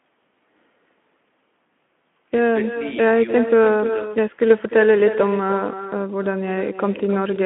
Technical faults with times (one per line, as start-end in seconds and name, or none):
0.00-7.45 echo with no canceller